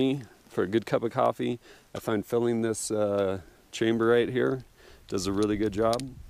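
CD scratch ticks appear from 1.26 to 1.94 s: six short ticks, roughly seven a second, none longer than a couple of milliseconds. A blemish on the disc surface wipes out more data than the player's error correction can rebuild, and it passes under the laser once per rotation. Each time, the player patches or briefly mutes the damaged samples, so the sound is broken by a regular train of tiny clicks or micro-gaps.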